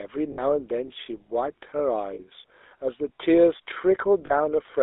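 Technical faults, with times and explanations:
Throughout: GSM full-rate codec. The speech has a plainly audible buzzy, gravelly roughness from a coder that models the vocal tract and drives it with a coarse, regularly spaced pulse excitation, which fits 13 kbps full rate. The band runs only from 300 Hz to 3.6 kHz.
0.32–0.41 s, 2.14–2.19 s and 4.26–4.31 s: lost GSM frames. Gaps of 60 ms, then 40 ms and 40 ms, which fit three and two 20 ms frames. The decoder repeats the last good frame, so the sound holds as a brief rough, metallic ring.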